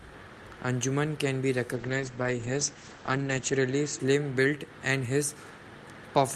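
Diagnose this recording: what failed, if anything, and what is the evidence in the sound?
A call bitrate drop runs from 1.77 to 4.05 s in the codec and network path. The speech turns rough and muffled, with everything above 8 kHz gone for nearly 1.8 s, which fits the encoder falling from about 64 to 11 kbps after a bandwidth estimate collapsed.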